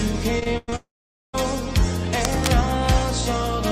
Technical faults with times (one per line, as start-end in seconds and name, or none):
0.39-0.74 repeated packet loss (robotic sound)
0.76-1.35 long network dropout
2.21-2.48 cable scratch noise